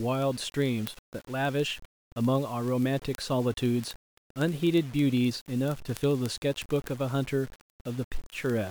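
Low bit depth without dither runs through the whole of this speech clip. The quantisation error tracks the signal, so there is a gritty, grainy distortion whose texture shifts with the level, and the quietest passages break up or sputter rather than fading smoothly. The grain sits roughly 25 dB below the speech, which points to around 6-bit resolution, most likely from plain rounding with no dither to decorrelate the error. Word clock ticks run from 0.11 s to 8.68 s as a steady stream of sharp, uneven clicks about every 40 ms, roughly two hundred in all. This pattern comes from a receiving device running on its own clock instead of locking to the sender's digital link. The two clocks differ by something like 700 parts per million, and each time they slip past each other a single sample is dropped or repeated, leaving a tick.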